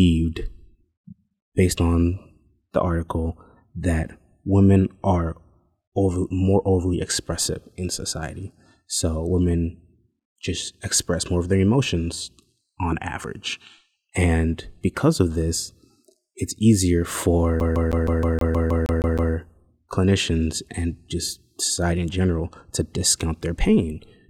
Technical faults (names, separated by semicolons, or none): CD stuck on one turn